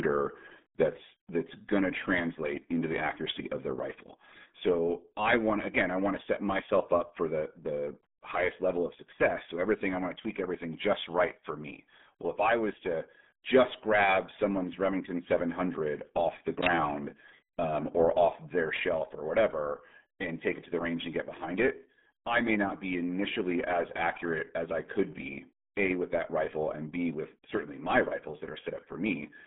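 Throughout, RealAudio 14.4 codec damage is heavy. Nothing passes above 3.8 kHz. Speech sounds muffled and gargly, which fits an 8 kbit/s dial-up codec.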